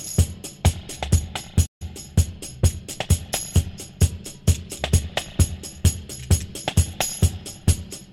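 At 1.66 s the player likely ran short of data or had its thread held up, producing a playback stall: output drops to silence in mid-flow for about 143 ms, and the sound resumes around 1.82 s, leaving a clear hole.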